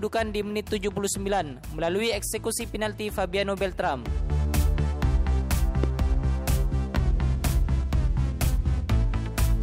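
Two loud pops break into the audio at 5.84–5.86 s and 6.95–6.97 s, peaking roughly 15 dB and 10 dB above the signal, which continues underneath rather than cutting out. The cause is likely a voltage spike from a plug, switch or static.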